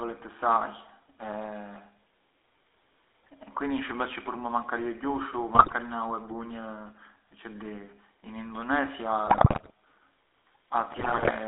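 Throughout, the GSM full-rate codec narrows the speech to roughly 300 Hz to 3.7 kHz and adds its gravelly, buzzy roughness from pulse-driven excitation, rather than the clean dullness of simple band-limiting. GSM bit errors strike from 5.54 to 5.73 s, 9.26 to 9.72 s and 10.92 to 11.31 s. Corrupted filter, pitch and gain values make the speech squawk, pop and gargle, instead of leaving the silent gaps of lost frames.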